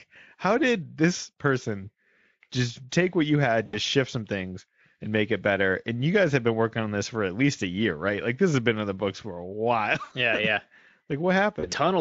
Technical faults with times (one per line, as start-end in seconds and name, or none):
3.65-3.77 VoIP packet loss concealed by the speech codec
10.03-10.14 VoIP packet loss concealed by the speech codec
11.59-11.72 VoIP packet loss concealed by the speech codec